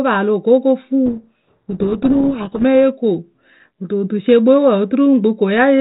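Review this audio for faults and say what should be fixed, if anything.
Codec payload misread from 1.06 to 2.63 s: on this 32 kbit/s G.726 link, the receiver unpacks each code word with its bits in reversed order, so the decoder turns valid-looking frames into wrong sample differences, burying the speech under harsh distortion until packing agrees again. To prevent it, make both ends negotiate and confirm the same G.726 bit-packing order (for example, the RTP payload type that names it) before the call's audio starts.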